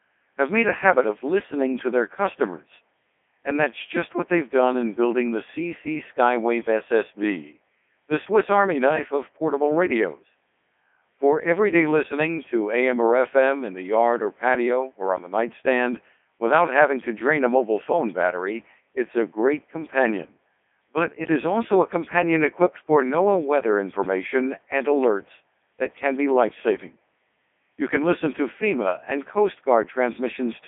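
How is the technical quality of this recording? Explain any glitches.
The technical quality is poor. Heavy vocoder processing affects the entire recording.

Codec 2 vocoder, throughout: the speech is rebuilt from pitch, voicing, energy and a spectral envelope, so it sounds robotic and buzzy, held to about 250 Hz to 3.6 kHz with nothing above 3.8 kHz. The damage fits its top 3.2 kbit/s mode. A plain telephone line would narrow the band but keep the natural waveform. Here the voice itself is synthesised from sine waves.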